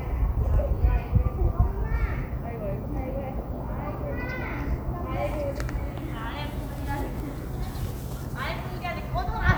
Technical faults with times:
none

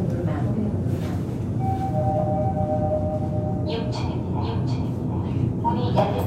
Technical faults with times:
0.00-6.26 doubled audio track

